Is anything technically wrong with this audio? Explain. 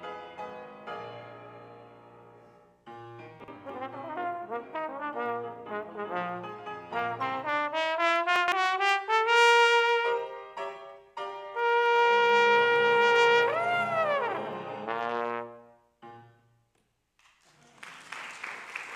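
Yes. Chunks out of order occur twice, at 3.40–3.48 s and 8.36–8.52 s. Each 40 ms chunk arrived late and plays one, then three, chunks after its proper place. Nothing is lost, but the reordering creates three hard joins per event, heard as brief jumbled moments.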